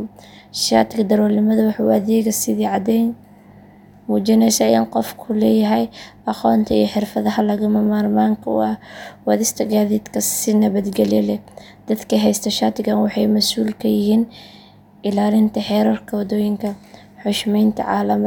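No technical faults can be heard anywhere in this speech recording. There is nothing in it to mark at any point in time.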